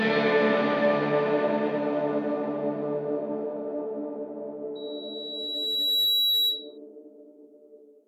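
At 4.75 s a loudspeaker feedback squeal starts under the music. A microphone is picking up the loudspeaker it feeds. At 3.9 kHz the loop gain rises above one, so that frequency keeps reinforcing itself. It swells over about a second and a half into a piercing single tone. At its peak it sits about 5 dB above the music. It holds until 6.78 s, when it stops.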